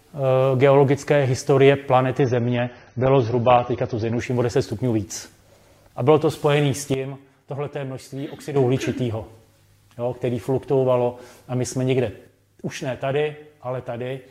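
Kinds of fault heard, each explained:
Adaptive stream at a lower bitrate: From 2.19 to 4.19 s the treble abruptly disappears above 6.3 kHz and the sound turns thinner and more artefact-laden, with no gap, which fits a switch from 96 to 24 kbit/s AAC. A spectrogram shows a flat ceiling across that stretch.
Sudden gain jump: At 6.94 s the level drops by about 10 dB and recovers at 8.56 s, and at 12.27 s it drops by about 6 dB through the end. The background noise falls together with the sound. This is likely an unramped digital gain change, seen as step edges in the waveform envelope.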